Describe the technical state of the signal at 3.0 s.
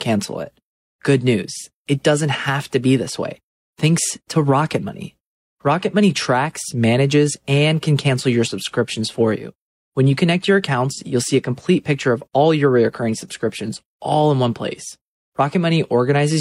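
At 3.0 s the signal is intact, with no dropout, distortion, glitch or other fault audible at that moment.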